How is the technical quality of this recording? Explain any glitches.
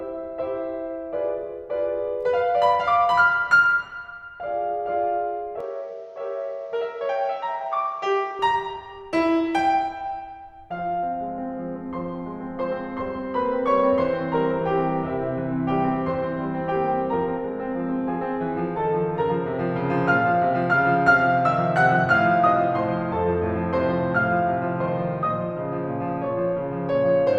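The music has one glitch. From 5.60 to 8.39 s the top end vanishes above 7.2 kHz, level drops about 5 dB, and faint new hiss appears, likely an input switched to a poorer device.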